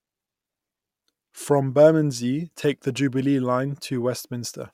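No technical faults are audible.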